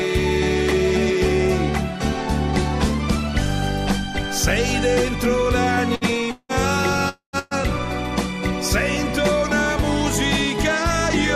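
At 5.95 to 6.04 s a burst of packet loss removes about 60 ms of audio. The receiver bridges the gap by continuing and fading the last sound before the audio resumes further on.

At 6.31 to 6.52 s and again at 7.09 to 7.36 s, gaps of about 180 ms and 240 ms are most likely long network dropouts. Unlike the bursts, the fading continuation runs out before the audio returns, leaving about 40 ms and 110 ms of silence.

At 7.39 to 7.54 s a second burst of packet loss drops 120 ms. The held, fading sound covers all of it, with no silence.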